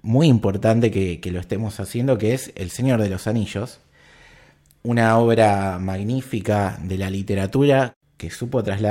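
Listening through this recording of speech, nothing technical stood out at any point.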